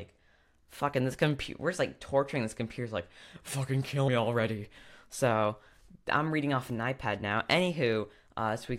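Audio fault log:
4.08 s: compressed frames skipped, a few 26.1 ms frames drop out, so the speech lurches forward about 70 ms with a soft smeared blip, not a click.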